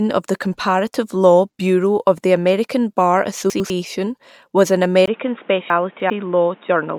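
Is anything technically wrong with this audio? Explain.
Yes, there are two kinds of fault in this speech.

Chunks out of order occur at 3.5 to 3.7 s and again at 5.7 to 6.1 s. In each case a 100 ms block of audio is played late. The first is displaced by one block and the second by three, so the sequence is shuffled but nothing is dropped. You hear a brief jumbled moment. On the waveform the joins show as abrupt discontinuities. On a spectrogram they appear as vertical broadband lines where the speech contours jump.

An input switched to a poorer device begins at 5.06 s, right after "was an", and lasts to the end. It is likely that recording moved to a lower-grade microphone or a headset call profile. There is a gap of about 20 ms at the switch. After it the sound is duller and narrower, with nothing above 3.8 kHz, and a new noise floor sits roughly 30 dB below the speech. Loudness stays about the same. 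A spectrogram shows the upper band abruptly emptying and a steady haze of noise filling in beneath the speech.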